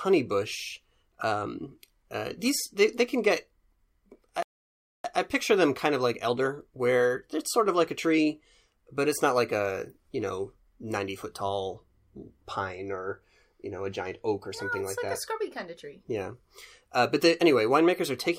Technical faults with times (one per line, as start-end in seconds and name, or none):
4.43-5.04 playback stall